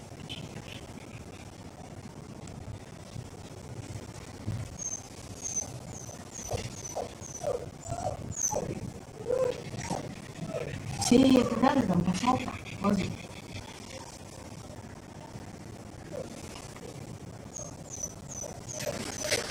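A steady stream of ticks runs from 0.09 s to 19.44 s, one every 64 ms, about 15 to 16 a second, heard only where there is signal. These are periodic USB or driver dropouts: at that fixed interval something stalls the USB link or audio driver, and each time around 10 ms of audio is lost and replaced by silence. The hundreds of regularly spaced gaps produce the clicking rhythm.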